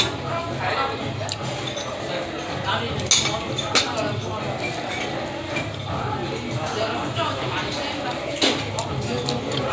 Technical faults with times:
none

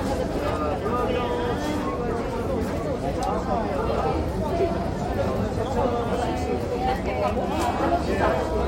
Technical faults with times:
none

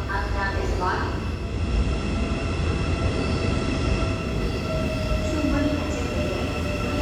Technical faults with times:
1.30-4.44 digital radio blending to analogue
2.63 underrun with held sample

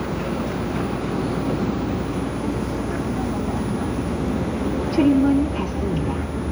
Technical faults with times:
none

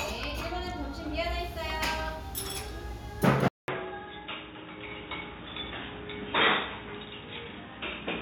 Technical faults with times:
3.48-8.21 input switched to a poorer device

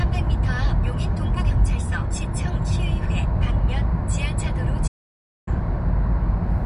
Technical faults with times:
4.87-5.48 playback stall

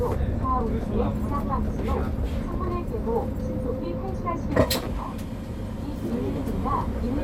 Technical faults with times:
2.40-2.54 DAB burbling

